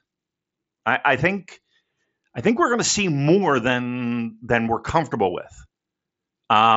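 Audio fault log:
The speech carries no faults; it comes through a Bluetooth mSBC headset codec that leaves nothing above 7.7 kHz and adds only a light grain, which fits a 61 kbps mSBC stream.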